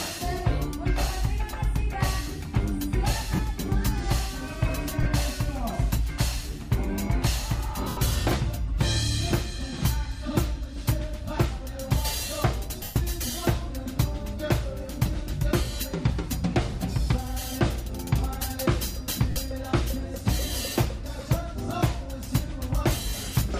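Lost LE Audio frames break the sound at 3.35 s (40 ms), 5.03 s (30 ms), 7.88 s (90 ms), 12.83 s (130 ms) and 19.30 s (60 ms); the gap lengths fit 10 ms frames. At each dropout the LC3 decoder fills the hole by replaying the last spectrum with scrambled phase, so tonal content turns into a brief noisy smear. In the longer 90 ms and 130 ms gaps, that smear fades down toward silence before the audio resumes.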